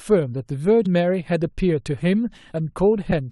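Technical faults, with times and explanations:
0.85 s and 3.10 s: damaged data in a compressed stream. Each event is a brief blip in the speech, lasting under 20 ms. At these points, part of the compressed data was corrupted. The decoder could not read those frames correctly and briefly lost sync. It then had to hunt for the next valid frame header before normal decoding resumed. The bad frame is heard as a chirp, squawk, click or short hole.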